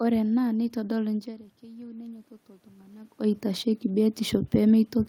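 Automatic gain rising runs from 1.6 s to 4.47 s in this speech. The input level fell by about 20 dB, and the automatic gain control responded by lifting its gain by about 6 dB over nearly three seconds. Because the gain applies to everything the microphone picks up, the voice and the room noise swell together, so the background grows audibly louder along with the speech, alongside the level shifts from the talker moving around 1 s and 3 s.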